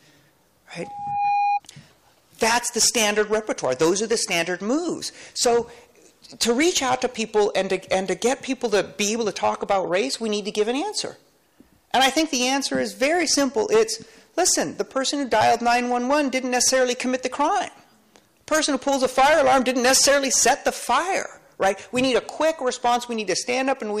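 At 0.83 s a loudspeaker feedback squeal starts. A microphone was picking up the loudspeaker it was feeding. At one frequency the loop gain rose above one, so that tone fed on itself. Here it is a single tone near 816 Hz. It swells over roughly 0.4 s and reaches about the level of the surrounding sound. It then stops at 1.60 s.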